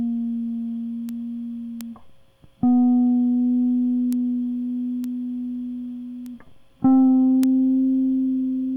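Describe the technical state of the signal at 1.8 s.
At 1.81 s the music carries a bit error spike: a single corrupted sample in which one flipped bit, from a memory or digital-link error, throws the value by a power of two before the next sample returns to normal. The excursion peaks at about -7 dBFS and lasts one sample, so it is heard as one sharp, broadband tick that bears no relation to the surrounding musical material.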